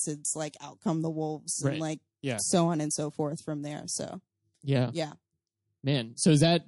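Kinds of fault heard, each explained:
MP3 compression: plainly audible coding damage throughout, likely from MP3 at a low bitrate near 48 kbps; unlike steady hiss, it comes and goes with the sound.
pre-echo: a hiss about 11 dB up in the 24 ms before an attack at 0.54 s, as a long block spreads noise ahead; unlike reverb, it precedes the attack.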